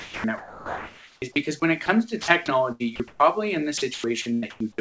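From 0.0 to 1.22 s the sound is chopped, likely by the voice detector switching on and off. Real sound alternates with patches of steady comfort noise. At 1.86 s, and again from 2.22 to 2.28 s, sound is dropped, likely by the voice detector. Each brief gap is filled with smooth noise. The chopping likely returns from 2.72 to 3.20 s and from 3.78 to 4.60 s. The sound breaks up there.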